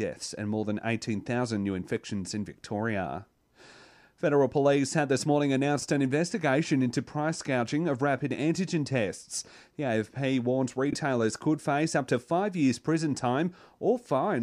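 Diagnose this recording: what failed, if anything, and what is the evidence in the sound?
Frames out of order, a network or transport fault: at 5.79–5.85 s ("police had this morning" / "an investigation into price") and 10.90–10.95 s (before "could face up to"), two adjacent ~23 ms blocks play swapped, a brief flutter. A spectrogram shows three vertical breaks in harmonics, and no time is lost.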